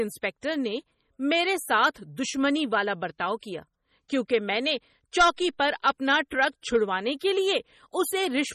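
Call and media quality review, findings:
MP3 compression, throughout the speech, 0 to end. Heavy watery, swirly texture; weak spectral detail flickers on and off between frames; attacks smeared. Nothing above 15.4 kHz, a hard treble cutoff. Likely cause: MP3 encoder starved of bits, which fits a low bitrate around 32 kbps, so it discards quiet frequency lines and the top band.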